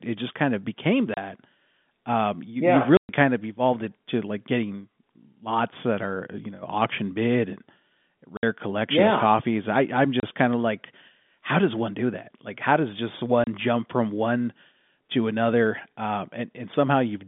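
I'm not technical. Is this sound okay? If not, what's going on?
No. The speech has packet loss filled with silence: small chunks of audio went missing on their way across the network, and the receiving end played nothing in their place. You hear brief holes at 1.14, 2.97, 8.37, 10.2 and 13.44 seconds. Most last 30 milliseconds. The gap at 2.97 runs 120 milliseconds and the one at 8.37 runs 60. All are steps of 30, which points to 30-millisecond packets.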